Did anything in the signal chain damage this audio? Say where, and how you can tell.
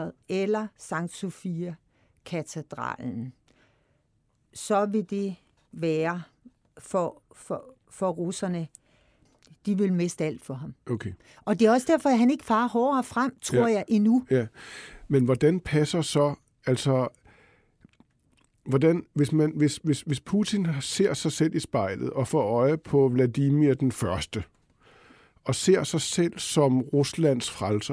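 No, nothing in the signal chain damaged this audio.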